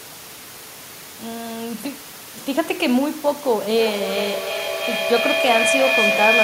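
Speech, with a shrill tone near 2 kHz that swells from 3.76 s to the end, its loop repeating about every 300 ms and peaking about 2 dB above the speech. This is a feedback howl: two devices in one room share the call, so each trip around the microphone-to-loudspeaker loop adds level. Room noise sits about 16 dB under the speech.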